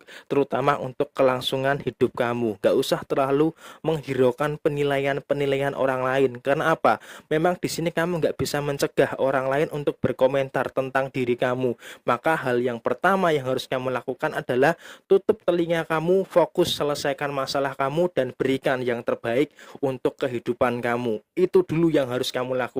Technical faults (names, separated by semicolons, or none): overlap between stream segments